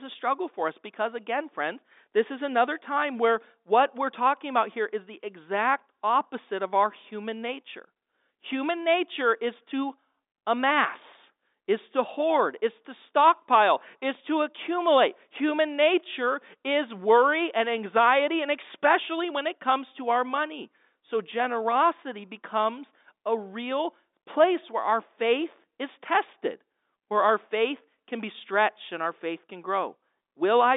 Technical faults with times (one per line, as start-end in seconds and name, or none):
none